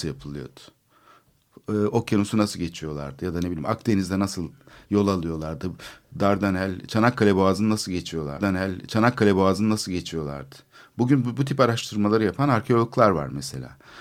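A stream segment repeated from 8.37 s to 10.37 s: the player queued the same chunk of the stream twice, so two seconds of speech play through and then play again. The jump back to the start of the duplicated segment leaves a small blip at the seam, and the repeat adds 2 seconds to the running time. A listener hears the same stretch of speech return unchanged, as though the stream stuttered backwards.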